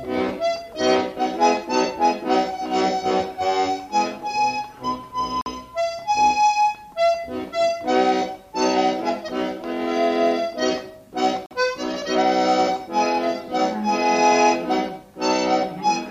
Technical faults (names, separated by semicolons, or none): gap between chunks